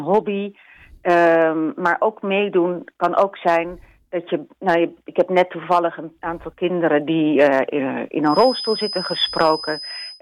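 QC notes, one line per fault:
8.22–10.21 s feedback whistle: a thin, steady tone at 5 kHz sits about 10 dB under the sound right to the end, swelling and fading slowly in level. Likely a speaker-to-mic loop hovering at the edge of feedback, ringing without running away.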